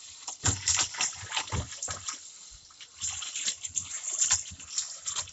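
No technical faults are audible.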